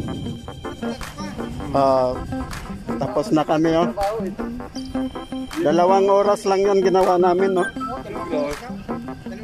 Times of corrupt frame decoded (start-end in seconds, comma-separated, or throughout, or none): 3.03-3.06